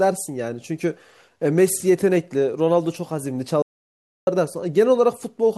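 At 3.62 s the speech cuts to dead silence, with no room tone, until 4.27 s. This audio dropout to silence likely came from lost input.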